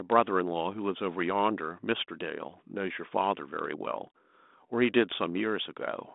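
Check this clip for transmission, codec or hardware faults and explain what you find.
Nothing here points to a transmission, codec or hardware fault: the speech has the narrow telephone band you'd expect from a G.726 ADPCM link, with nothing heard above about 3.8 kHz, and the light coding texture fits the codec running normally at what sounds like 32 kbit/s.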